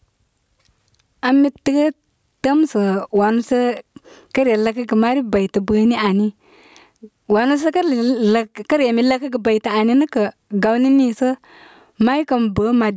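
Speech with a gain swing of around 15 dB all the way through, leaving loud and quiet passages squashed close together. This is gain pumping, likely from input gain set far too high and a fast limiter or compressor clamping down on each loud sound, over a call path whose microphone processing leaves nothing above 8 kHz.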